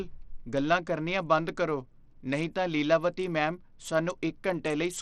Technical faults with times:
0.00-5.02 Bluetooth SBC compression

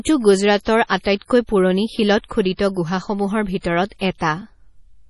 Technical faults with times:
0.00-5.09 MP3 compression

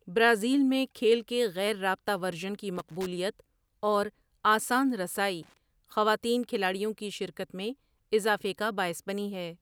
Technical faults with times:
2.76-3.06 loose connector crackle
5.43-5.57 loose connector crackle

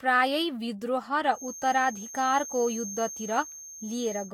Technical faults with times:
0.00-4.33 generation loss
1.29-4.33 feedback whistle

